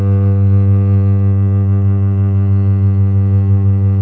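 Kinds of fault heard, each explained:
Kinds of fault heard: none in this music clip.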